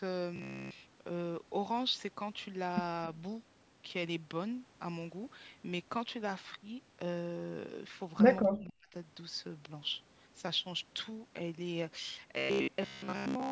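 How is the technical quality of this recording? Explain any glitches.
The recording has three glitches: two robotic passages and one brief dropout.

From 0.36 to 0.81 s and again from 12.38 to 13.52 s, the speech turns into a rigid metallic buzz near 66.8 Hz. This is robotic sound, likely from repeated short buffers. About 15 ms of audio is looped while most of the real signal is skipped.

From 8.49 to 8.94 s, the speech sinks by about 40 dB. This is likely speech suppressed in double talk. The echo canceller mistook the talker for echo and turned both down.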